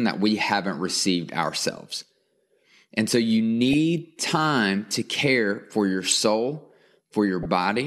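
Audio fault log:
3.73 s, 6.05–6.12 s and 7.43–7.46 s, corrupt frame decoded: three brief chirp-like blips of noise cut into the speech. The loudest, at 6.05–6.12 s, peaks at about -10 dBFS, the one at 3.73 s at about -15 dBFS, and the last at about -20 dBFS. Each is a damaged compressed frame that the decoder played anyway. Misread gains and codes put energy at the wrong frequencies for roughly as long as the few affected frames last.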